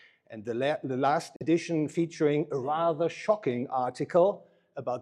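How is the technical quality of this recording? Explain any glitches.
There's one glitch: at 1.36 to 1.42 s the sound cuts out abruptly, likely a Bluetooth dropout where a couple of late packets were discarded, then resumes as if it had played on.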